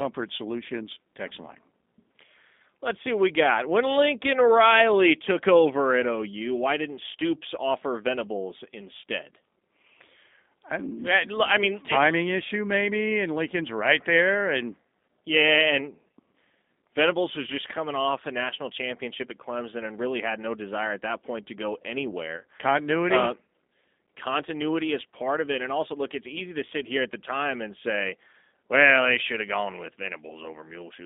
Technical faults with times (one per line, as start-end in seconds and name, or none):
0.00-31.05 G.729 codec
22.37-22.45 VoIP packet loss concealed by the speech codec